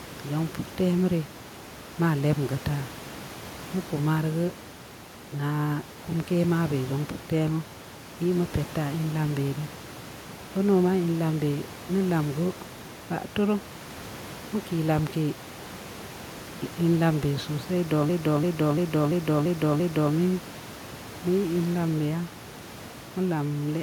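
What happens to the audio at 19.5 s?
A system hang loop runs from 18.09 to 20.14 s. One 341 ms slice, which fits a 16384-sample buffer, repeats six times, stuttering at about 2.9 per second.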